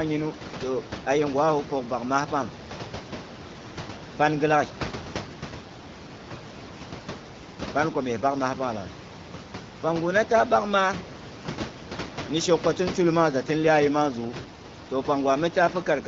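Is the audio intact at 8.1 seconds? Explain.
Yes, the audio is intact at 8.1 seconds, with no fault at that moment.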